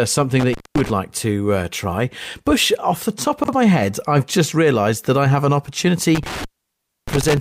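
Speech, interrupted twice by sudden dropouts with crackle at their edges. The first falls between 0.39 and 0.90 s, with the sound gone for about 0.21 s. The second, between 6.15 and 7.37 s, cuts out for about 0.63 s. While the line is open faint hiss remains. This is intermittent contact: a loose cable or plug briefly breaks the signal path, and the scratchy make-and-break of the connection produces the crackle on either side of each gap. At 3.44 to 3.53 s the speech briefly sounds jumbled. This is chunks out of order: a roughly 46 ms block of audio was delivered one chunk late and plays after the block that should follow it. No sound is lost, but the sequence is wrong, with three hard joins between mismatched waveforms around that scrambled moment.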